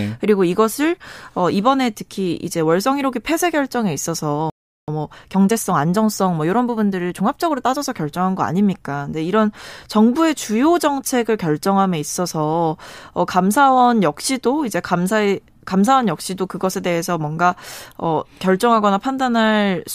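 At 4.5 s the speech halts in a playback stall, going silent for about 380 ms until 4.88 s, likely because the player's buffer ran dry or its thread was held up. On a waveform this is a flat gap; a spectrogram shows a clean vertical band of nothing.

From 4.88 s to 7.88 s comes time-compressed catch-up: the player trims its backlog by dropping small segments and cross-fading the joins, so speech runs 1.1 times fast at unchanged pitch. A spectrogram shows normal harmonic spacing but slightly squeezed, choppy timing.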